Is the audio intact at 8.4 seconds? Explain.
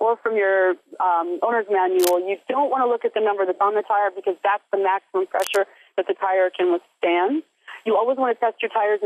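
Yes, at 8.4 seconds the audio is intact, with no dropout, click, distortion or other fault.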